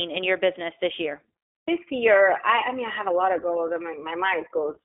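From start to end, the speech passes through the iLBC codec. Each 20 ms frame is coded on its own. Nothing above 3.7 kHz survives, leaving a thin telephone band. The voice sounds plainly rough and synthetic, which fits 15.2 kbps iLBC.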